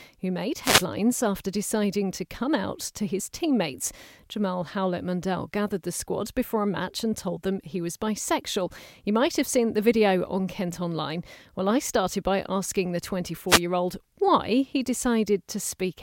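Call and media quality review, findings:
Wireless microphone noise hit, two events in speech: 0.61–0.86 s after "who made", before "after deciding to come"; 13.48–13.61 s after "started by asking the", before "year old why he". Swish of static rising over the voice, then fading back. Component: analogue FM radio link. Mechanism: reflected paths cancel the carrier and receiver noise surges. Distinguishing: broadband hiss that swells and recedes, not the abrupt silence or robotic smear of digital packet loss.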